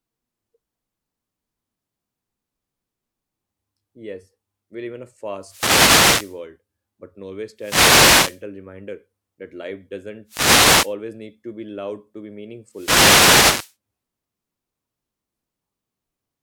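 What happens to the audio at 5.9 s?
At 5.9 s you're in the middle of a wireless microphone noise hit, running from about 5.41 to 6.42 s. The mic's radio signal fades as reflections cancel each other, so receiver noise climbs up over the speech as a brief swish of static.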